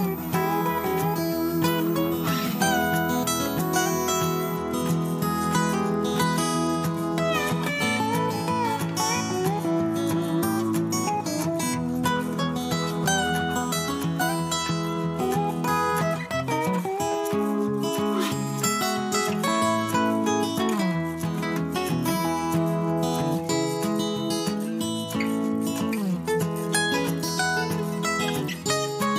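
From 0.0 to 4.56 s a switching supply whistle sits over the sound: a thin, high tone that wanders between about 13.4 and 14.3 kHz, roughly 15 dB below the programme. A switch-mode supply running in an audible burst or beat mode leaks its cycling into the audio path. On a spectrogram it shows as a narrow, slightly wavering line near the top of the band, ending at 4.56 s.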